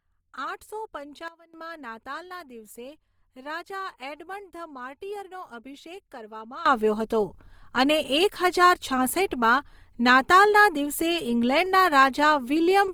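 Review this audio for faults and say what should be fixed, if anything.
Right through the clip there's Opus compression at work: the speech has that rough, grainy texture rather than the swirly holes you'd get from MP3, and the damage is plainly audible. It's likely the codec's music (CELT) mode, which keeps each band's energy but fills starved bands with folded or noise content when bits run short. The bandwidth stays full, out to about 20.2 kHz, and the amount of grit points to a rate around 24 kbps. Encoding at a higher bitrate, or keeping an uncompressed master, would avoid this.

There are two sudden gain jumps, where the level steps instantly with no ramp, dragging the background noise along with it. At 1.28 s everything drops by about 16 dB, then comes back at 1.54 s, just before "નાતાલના દિવસે રાજા એડમંડ". At 6.66 s, right after "માર્ટિયરનો અભિષેક કરવામાં", the level leaps up by about 18 dB and stays there to the end. 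The likely cause is a gain setting applied sample-to-sample. Always ramp gain changes over a few milliseconds to stop this.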